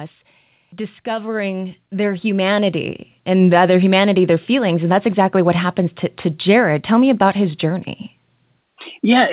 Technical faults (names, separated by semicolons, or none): automatic gain rising